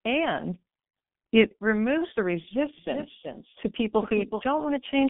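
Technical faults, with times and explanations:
Throughout, G.723.1 codec: a low-rate telephony coder, here at a rate that fits about 6.3 kbit/s, strips everything above 3.7 kHz, leaving speech muffled, hoarse, with smeared consonants.
2.78–4.42 s, doubled audio track: just after "it removes the", a second full-band copy trails by roughly 0.4 s, a few dB quieter, starting and stopping abruptly, likely from an out-of-step edit or capture.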